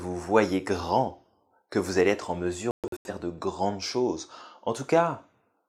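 At 2.71 to 3.10 s the speech breaks up in a digital broadcast dropout: the receiver mutes on failed frames, leaving about 256 ms of scattered silent gaps, the longest 128 ms, seen as blank vertical holes.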